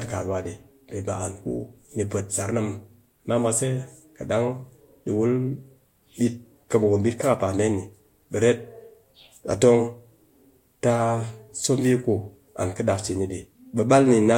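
A speech recording with no audible technical fault anywhere in the signal.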